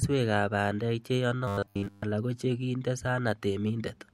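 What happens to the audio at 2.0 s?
From 1.48 to 2.03 s the speech becomes robotic sound from repeated short buffers, a rigid 100 Hz metallic buzz throughout, likely from looping 10 ms chunks. Unlike codec warble, its pitch stays fixed until "ala kochekinde".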